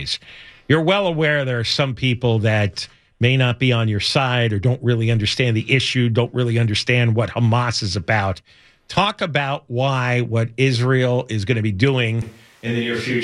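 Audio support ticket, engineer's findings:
12.22 s to end: speech abruptly roomy, hollow, thinner bass, roughly 5 dB quieter, more background noise. Likely a switch to a distant microphone; reverb and noise rise, unlike a plain gain drop.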